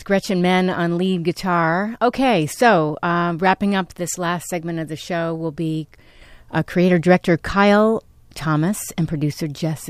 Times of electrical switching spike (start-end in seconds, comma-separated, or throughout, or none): 2.14